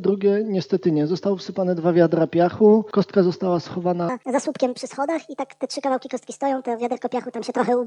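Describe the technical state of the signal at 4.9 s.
At 4.9 s the audio sounds hurried and noticeably raised in pitch, about seven semitones higher than before, with everything moving too quickly. This is a section at the wrong speed, running from 4.09 s to the end of the clip at 1.5 times its proper rate. Speed and pitch rise together at the 4.09 s boundary, which points to a likely playback or editing clock mismatch that played this stretch of sound too fast.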